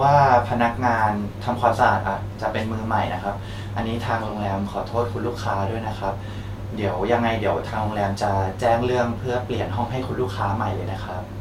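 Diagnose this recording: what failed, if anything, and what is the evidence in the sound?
Nothing failed: no stage from capture through to playback leaves an audible fault anywhere in this speech.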